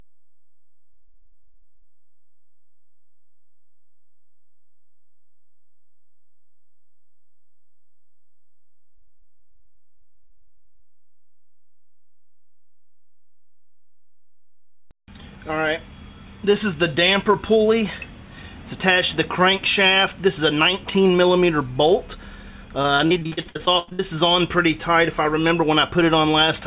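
Choppy stretches break up the audio from 0.92 to 1.99 s, 8.95 to 10.97 s and 22.83 to 24.01 s, each a burst of repeated packet loss (robotic sound). Audio keeps vanishing in short holes, mostly up to 40 ms and one of 84 ms in the last burst, and each hole is papered over by stretching the preceding sound. That concealment fills roughly a quarter to two fifths of each burst, all within a band that stops at 4 kHz, as a narrowband call path would.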